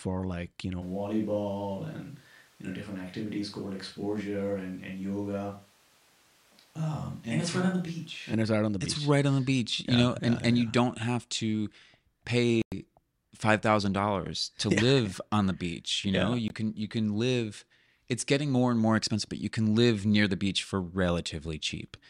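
From 0.83 s, right after "like you know", the speech suddenly goes roomy and hollow, thinner in the bass, roughly 5 dB quieter and with more room noise, until 8.32 s at "it's right on the." That's likely a switch to a distant microphone. Then a Bluetooth dropout, likely from lost packets, punches a silent hole at 12.62 s lasting about 100 ms, and a shorter 20 ms one at 16.48 s between "know yeah" and "can you can live." Both times the sound comes back further along, as if it had kept playing.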